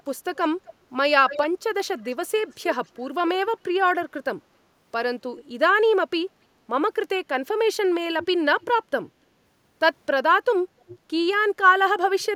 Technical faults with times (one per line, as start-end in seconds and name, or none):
0.00-0.73 echo leak
1.29-1.44 echo leak
1.98-2.96 echo leak
5.37-5.44 echo leak
8.19-8.73 echo leak
10.88-10.99 echo leak
12.20-12.36 echo leak